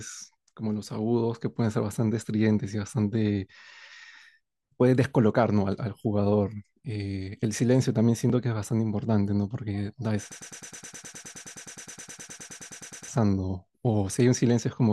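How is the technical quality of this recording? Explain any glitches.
The recording has one clear fault, a broken-record loop from 10.32 to 13.08 s. A fragment of about 0.10 s repeats exactly, 26 times back to back. The playback or stream likely stalled and kept resending its last buffer. The speech due in that span is lost.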